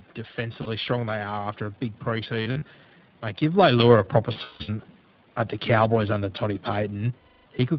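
iLBC codec, throughout: the speech is held to narrowband, with nothing above 4 kHz, and sounds slightly rough and synthetic, fitting the 20 ms, 15.2 kbps mode.

Lost iLBC frames, at 0.62–0.68 s just before "strong they are", 2.42–2.67 s after "a big", 4.32–4.70 s after "a proper", and 7.18–7.46 s: the decoder repeats the last pitch cycle mixed with noise. Each gap sounds like a held, buzzy vowel. The losses are 40 ms, 140 ms scattered over 240 ms, 260 ms scattered with a run of about 150 ms, and 280 ms. The voice is right again almost immediately after each gap.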